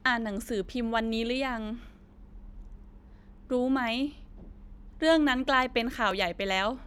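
From 0.65 s to 6.11 s, clicks recur in the speech every 1.37 s, about five in all. These are clock drift buffer slips. Two clocks likely disagree by about 500 ppm, so a buffer overflows or runs dry, dropping or repeating a few dozen samples each time.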